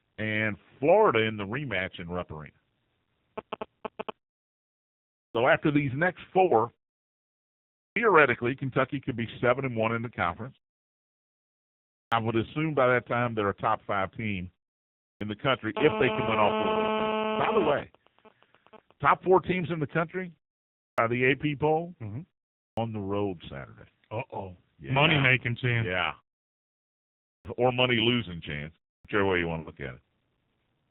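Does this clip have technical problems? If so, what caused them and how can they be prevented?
Yes. AMR narrowband mobile codec throughout: everything above 4 kHz is gone, and the speech sounds heavily buzzy and synthetic, which fits a low AMR-NB mode of about 5.9 kbps, where too few pulses per subframe are available to model the voice. Prevent it by carrying the call over a wideband codec or a higher AMR mode.

Clipped start after a pause at 5.31, 7.92, 12.08, 15.17, 20.94, 22.73, 27.41 and 29.01 s: each time speech resumes after a pause of 0.3 to 1.6 s, the first 36 to 43 ms are missing, so the onset snaps in abruptly. The output device drops into a sleep state during silence and is still waking when the sound returns. Prevent it by keeping the output device active through silences or disabling its power-saving idle mode.

Lost AMR speech frames at 6.46 to 6.52 s and 29.60 to 29.72 s: the first gap lasts 40 ms and the second 60 ms, which fits two and three corrupted 20 ms frames. 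In each gap the decoder holds the previous pitch and vocal-tract shape at falling gain, so the sound smears and sags, then resumes roughly. Prevent it by improving radio link quality or using stronger channel coding.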